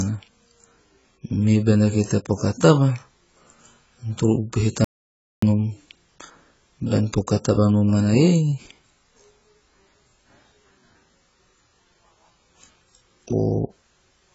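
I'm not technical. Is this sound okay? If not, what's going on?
No. The speech was likely squeezed hard by AAC compression, which discards detail. The voice sounds dull and smeared, with a fizzy edge and nothing above 7.7 kHz. There is also an audio dropout to silence from 4.84 to 5.42 s, likely caused by a lost input. The sound cuts to dead silence for about half a second, and whatever was said then is gone.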